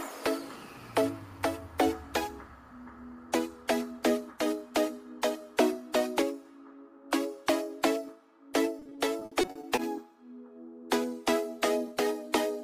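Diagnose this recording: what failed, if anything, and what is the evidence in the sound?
The network stage failed: packets were lost or arrived late again and again between 8.79 and 9.79 s, producing repeated packet loss with a robotic sound. The receiver fills each hole by stretching the last good sound forward, but the next hole comes before it recovers. That one-second stretch holds a rapid string of short gaps, the longest about 60 ms, with roughly 280 ms patched in total, a bit over a quarter of the span. The result is choppy audio with pieces missing.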